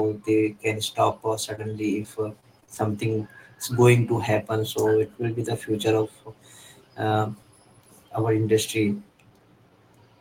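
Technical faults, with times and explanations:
1.55–1.59 s, short concealed packet loss: just after "they can stop uh", about 20 ms of audio failed to arrive and the receiver stretched the preceding sound over the hole, leaving a brief smear. It is a single isolated patch, not a recurring pattern.
2.03–2.79 s, repeated packet loss (robotic sound): six separate gaps, the longest 35 ms, totalling about 120 ms or 16% of the stretch, were each covered by extending the last sound. The closely spaced repeats give a choppy quality that a single dropout would not.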